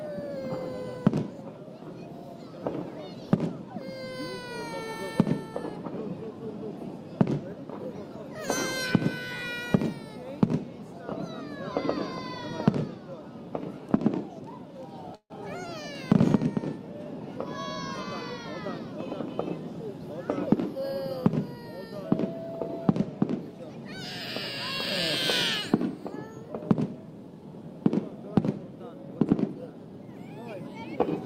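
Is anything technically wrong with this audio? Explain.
Yes, there are two faults, and they are linked.

At 15.15 s there is a call audio freeze lasting to 15.32 s. The last sound carries on as a fading buzz for a short while and then drops to silence for about 80 ms before the audio resumes exactly where it stopped. About 146 ms is filled in and nothing is lost. That is what separates it from a dropout. The likely cause is packets stalled in transit, leaving the jitter buffer empty, so the audio now runs 146 ms later than before.

From 17.20 s to 18.94 s comes the jitter buffer speed-up. The sound plays at 108% speed with its pitch unchanged, so it feels slightly hurried rather than raised in tone. This is how it differs from a sample-rate or clock error, which would shift pitch as well. Having built up excess delay, presumably after the freeze, the receiver trimmed many short pitch-period slices in quick succession, removing roughly 150 ms in total to bring the delay back down.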